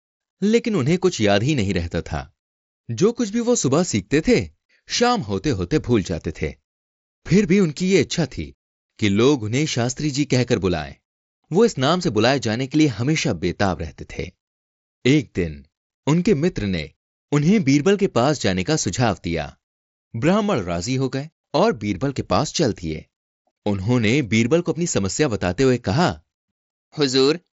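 No technical faults are present in the speech; it carries through a Bluetooth mSBC headset link, so the content stops at about 7.7 kHz and loud passages have a faint graininess typical of that wideband headset codec.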